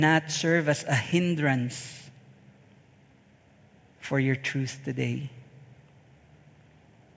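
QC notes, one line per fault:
No faults found in this clip. Nothing here needs flagging for review.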